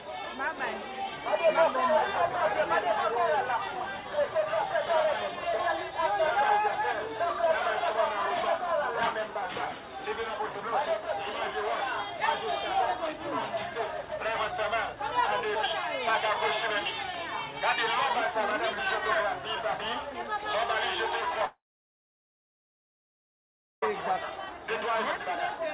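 At 21.45 s the sound breaks off. A short buzzy tail continues the last sound and fades within about a tenth of a second. Then about 2.2 s of silence follows. This is likely a long network dropout. The audio returns at 23.83 s with the gap's content lost.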